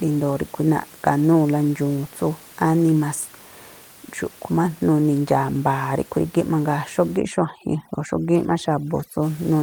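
From 7.17 to 9.23 s the speech shows overdone noise removal: a noise reducer set too strong pulls individual frequency bands down or out wherever they sit near its noise estimate. The background room noise, about 24 dB below the speech, breaks into twinkling, warbling specks, and quieter parts of the voice thin out.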